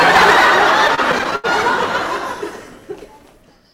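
Hard clipping runs from 0.0 s to 1.67 s. The signal arrives roughly 11 dB hotter than the stage can pass, so every peak is sheared off flat instead of rounding over. Those squared-off tops generate harmonics well above the original content, and with this much overdrive the result is a continuous harsh fuzz on every loud moment rather than occasional crackle. The distortion stops abruptly at 1.67 s.

Repeated stalls (stutter) overlap the clipping from 0.87 s to 1.46 s. Seven separate hold-ups interrupt the flow as the playback buffer keeps running dry while data arrives too late or too slowly. At each stall the receiver stretches the last bit of sound to bridge the wait, adding about 162 ms in total. That filler makes up about 28% of this stretch. The longest hold lasts 80 ms and fades as it goes. Nothing is dropped, but the sound drags and hiccups through this stretch.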